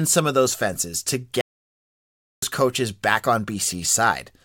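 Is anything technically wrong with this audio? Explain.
Yes, there's a playback stall. Right after "of those fences to", at 1.41 s, the speech drops to dead silence for about a second, until 2.42 s, then picks up with "coaches back". Most likely the player ran dry of buffered data or its thread got blocked, so output just halted until it caught up.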